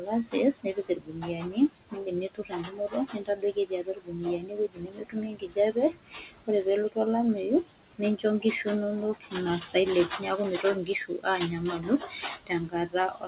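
Noise suppressor artifacts run through the whole clip. The suppressor pulls down each band it judges to be steady room noise, frame by frame. That noise sits about 17 dB below the speech.

The same suppressor also cuts speech, mistaking parts of it for noise. From the start to 6.97 s, around four seconds of speech are pulled down, by up to about 18 dB. Then come 7.63 to 8.67 s (about half a second, up to about 18 dB), 9.14 to 9.35 s, 10.18 to 11.26 s, and 11.71 s to the end, each up to about 16 dB. Soft consonants and word endings sound swallowed and faint. The lack of content above 4 kHz, from the narrowband call codec, makes them thinner still.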